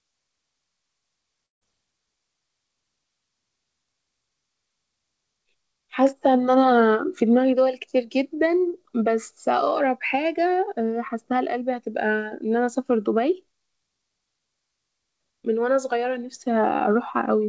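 From 1.46 to 1.63 s the speech gives way to a fading buzz, then silence, and resumes with a piece missing, likely a long network dropout.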